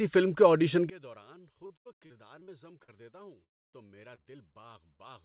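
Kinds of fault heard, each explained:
One channel inverted: From 0.90 s, just after "فلم کے آڈیشن", the speech drops by about 25 dB into a faint copy. The likely cause is one stereo channel with reversed polarity, so the centred speech cancels when both channels are summed to mono.
Repeated packet loss (robotic sound): From 1.66 to 2.90 s and from 3.44 to 4.20 s the speech turns choppy and robotic. Repeated brief holes, the longest 74 ms, are patched by stretching the previous sound, heard through the call's already narrow band below 4 kHz.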